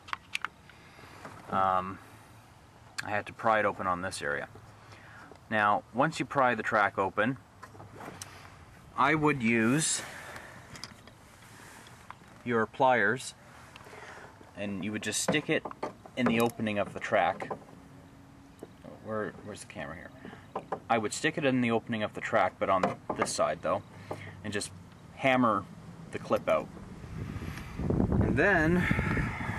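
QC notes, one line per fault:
Nothing to flag here, as there's no fault anywhere in this audio.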